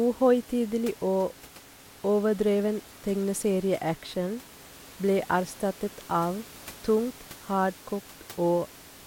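No technical faults are audible.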